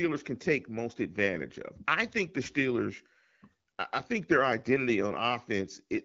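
A speech clip with nothing technically wrong in it.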